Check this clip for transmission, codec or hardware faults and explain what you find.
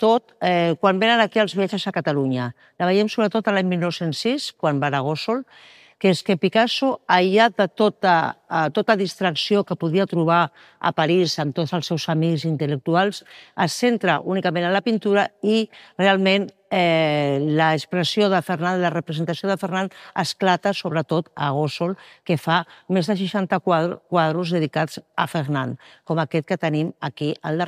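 I found nothing wrong in this recording.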